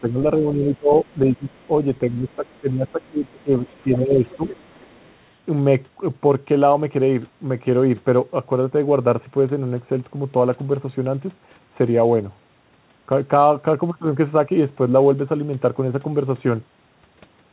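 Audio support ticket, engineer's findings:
Speech suppressed in double talk, 0.00–0.19, 0.38–1.52, 2.10–3.51, 3.71–4.47 s. Talker ducks by up to about 20 dB, shallower near 10 dB at start and end. Likely echo canceller treating overlapping far-end speech as echo, attenuating both.

Other side's voice leaking through, 1.58–1.67, 2.54–2.59, 3.67–3.97, 4.30–5.10 s. Faint second talker, about 35 dB under speech early, rising to about 25 dB under near 4 s. Likely residual loudspeaker echo left by the canceller. Audio is band-limited to 4 kHz throughout, consistent with a 64 kbps G.711 call path.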